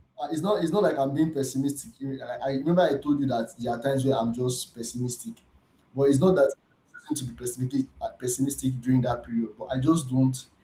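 From 0.18 s to 4.31 s the level climbs steadily by about 7 dB: automatic gain rising. The gain control judged the input too quiet and kept turning it up, so the speech and the background noise swell together over roughly four seconds.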